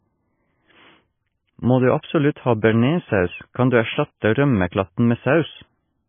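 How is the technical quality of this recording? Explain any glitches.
The recording is poor quality, with heavy damage throughout the speech that is likely MP3 compression. Starved of bits, the encoder has removed all treble, leaving nothing above 3.5 kHz, and zeroed weak frequency lines that flicker from frame to frame. The result is dull, watery, swirling speech, which fits a bitrate of around 17 kbps.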